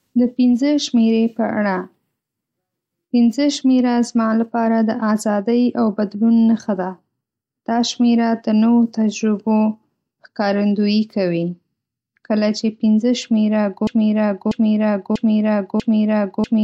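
A speech clip with a broken-record loop from 13.87 s to the end: a 642 ms fragment repeats exactly, back to back, four times. The likely cause is a stalled player or stream resending its last buffered fragment, so the intended audio there is lost.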